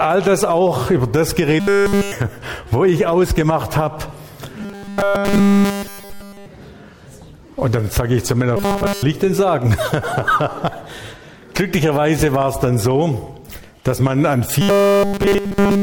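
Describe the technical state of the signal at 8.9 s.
At 8.9 s the signal is inside a stretch of robotic sound from repeated short buffers, running from 8.57 to 9.03 s. A steady buzz at 200 Hz replaces the normal texture, which fits a buffer of about 5 ms being played over and over. The likely cause is new audio arriving too seldom, with the playback filling the gap by looping the last short block while essentially all the real material in that span is skipped, leaving a rigid, metallic tone.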